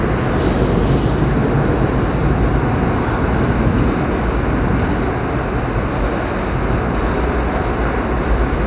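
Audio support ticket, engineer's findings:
Listened through the whole thing and nothing's wrong with it; no faults found on our end, so the ticket can be closed.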